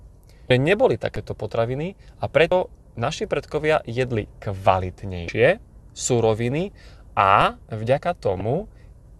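Damaged data in the compressed stream produces short glitches at 0.47–0.51 s, 2.48–2.52 s (between "potraviny a" and "naši predkovia jedli"), 5.25–5.29 s and 8.40 s, where the decoder misreads corrupt frames and resynchronises. DC steps at 1.16 s, just before "potraviny a", and 7.41 s shift the waveform's zero line, heard as low thumps or clicks, then decay as a 20 Hz high-pass would.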